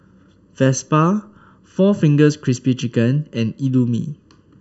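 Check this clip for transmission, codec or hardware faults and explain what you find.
There is one fault, channel delay with comb filtering, and it runs through the whole speech clip. One channel arrives late by under a millisecond relative to the other. When the two are summed to mono, their shared content cancels at evenly spaced frequencies. The first notch sits somewhere around 700 Hz, with more notches above it at regular steps. The speech sounds hollow and phasey throughout. The coloration stays fixed and does not drift.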